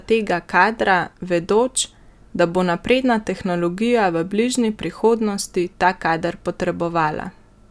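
No technical faults are audible.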